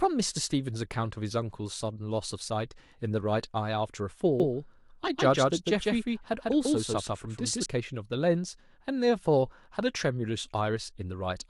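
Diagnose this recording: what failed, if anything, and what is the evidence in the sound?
From 4.40 to 7.66 s, an equally loud copy trails about 150 ms behind and switches abruptly: a doubled audio track, likely from a slower second capture path.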